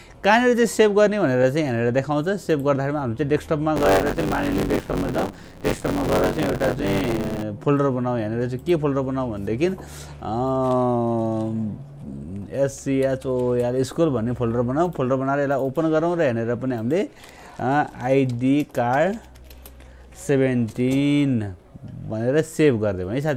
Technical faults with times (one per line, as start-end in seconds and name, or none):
3.75-7.43 buffer tearing